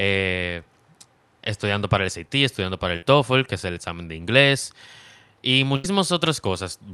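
A speech clip with two bursts of packet loss. The first runs from 2.96 to 3.03 s, between "estudiando para" and "que es el examen". The second runs from 5.76 to 5.85 s. Each time, packets were lost or arrived too late. The receiver held the last sound for 58 ms and then 76 ms, fading it down before playback resumed further on. About 60 ms and 80 ms of audio are missing. The call codec's band stops near 12 kHz.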